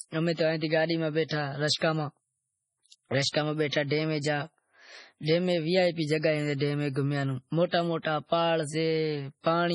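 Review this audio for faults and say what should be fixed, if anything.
Heavy MP3 compression runs throughout, likely from a bitrate near 24 kbps. Weak frequency lines flicker in and out, giving a watery swirl, and nothing remains above 10.6 kHz. A plain low-pass cut would lose the treble without swirling. Prevent it by encoding from the original at a much higher bitrate.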